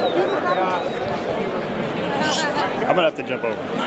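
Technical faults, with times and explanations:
No technical faults are present; the audio carries nothing above 8 kHz, the normal band limit of a call path.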